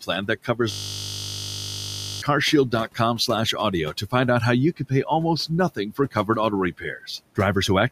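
A speech recording in which the noise suppressor clips speech in three stretches, 0.01–3.54 s, 5.48–6.29 s and 6.72–7.38 s, treating parts of the speech as noise. About half a second in total is pulled down in the first stretch, and less in the later two, with drops of about 16, 15 and 12 dB. Word edges sound swallowed and faint. On a waveform the envelope shows sudden dips, and on a spectrogram the speech energy fades into gaps. From 0.72 s to 2.22 s a system hang loop replays one 20 ms slice of audio about 75 times, heard as a steady 50 Hz buzz in place of speech. This happens when the system stalls while the audio hardware keeps cycling its buffer. The spectrogram shows evenly spaced harmonics at multiples of 50 Hz as flat horizontal lines, and the waveform shows an identical repeating cycle. Room noise sits about 22 dB below the speech.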